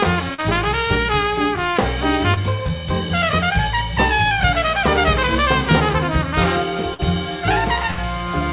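This is a music clip that's come through a call link, and everything above 4 kHz is gone, which points to a narrowband codec like G.711. There are two short concealed packet losses, at 0.34–0.40 s and 2.34–2.38 s, where the receiver papered over roughly 40 ms and then 20 ms by extending whatever was playing, so you hear a quick smear or wobble rather than a dropout. Later come two bursts of packet loss, at 6.94–7.01 s and 7.91–8.00 s. Here the fill stretches and fades into a held buzz or hiss, and when the music picks up again about 40 ms and then 60 ms of it have simply been skipped.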